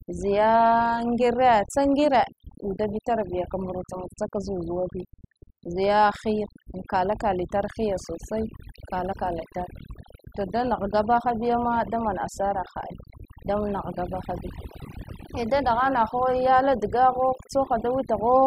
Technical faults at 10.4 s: overdone noise removal

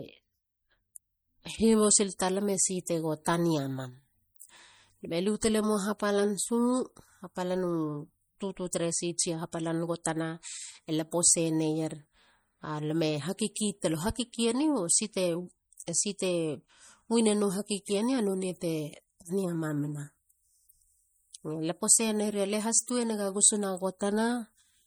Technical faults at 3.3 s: MP3 compression; pre-echo

